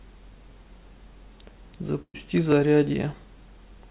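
From about 0.38 s to 3.6 s there's a regular tick in the speech, roughly every 1.08 s, four or so in all. That steady spacing is the signature of clock drift buffer slips. The likely cause is two devices running on separate clocks that disagree by something like 700 ppm, so the buffer between them creeps until a small block, a few tens of samples, gets dropped or repeated. Each slip is a tiny discontinuity, heard as a click.

At 2.02 s there's a burst of packet loss lasting until about 2.16 s. Around 120 ms of audio never arrived. The receiver papered over the hole by stretching the last bit of sound, which comes out as a held, fading buzz or hiss before going quiet for about 60 ms of that stretch. The speech then picks up further along, with that piece simply gone. All of this sits on a narrowband call sound with nothing above 4 kHz, which fits G.711 A-law.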